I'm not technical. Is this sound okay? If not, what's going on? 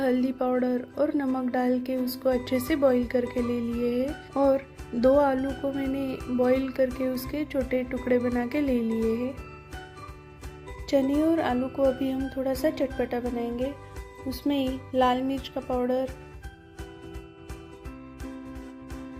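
Yes, nothing stood out as a problem when listening to it.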